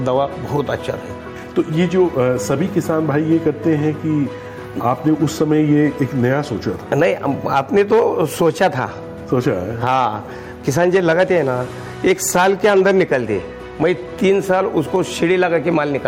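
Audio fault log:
Throughout, gain pumping. The level swings by around 10 dB. Loud and quiet parts sit close together, so the sound feels squashed. The likely cause is input gain set far too high for the microphone. A fast limiter or compressor then pulls the level down on each peak and lets it recover between them.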